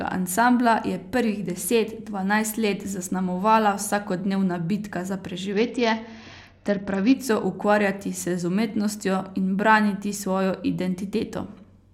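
From about 5.53 s to 7.14 s the speech goes through a Bluetooth SBC bit pool drop. The link seems to have got congested, so the encoder starved the bit pool, which fits a fall from around 28 down to 8, roughly 72 kbps. The top sub-bands lose nearly all their bits and the rest are quantised coarsely, so for about 1.6 s the treble goes dull and a gritty hash rides under the speech before the rate recovers.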